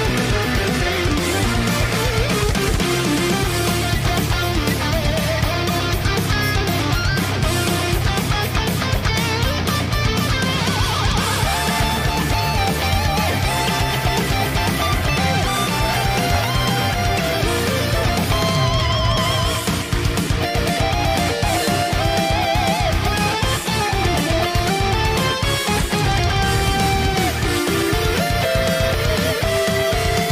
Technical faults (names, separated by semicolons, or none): repeated buffer